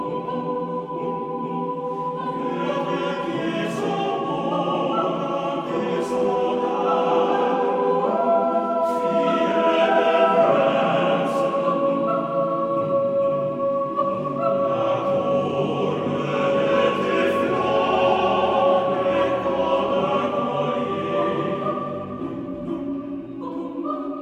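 Nothing stood out as a technical fault anywhere in the audio on listening.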